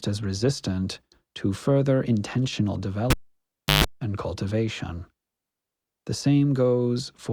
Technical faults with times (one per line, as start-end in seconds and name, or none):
3.10-3.84 cable pulled and plugged in